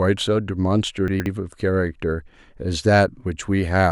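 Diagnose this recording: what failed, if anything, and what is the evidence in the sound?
The buffering stage let chunks out of order: between 1.08 and 1.26 s a 60 ms chunk plays after the two that should follow it. Nothing is missing, but the speech briefly sounds jumbled, with three hard joins.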